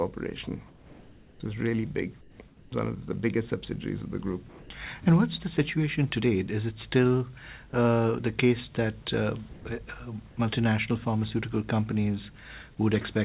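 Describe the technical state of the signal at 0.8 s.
At 0.8 s you're inside a stretch of comfort noise in place of the background, running 0.68 to 1.4 s: the real background gives way to smoother synthetic noise at about the same level, likely because the sender paused transmission and the receiver filled the gap. Everything sits below 4 kHz, as expected from the call codec.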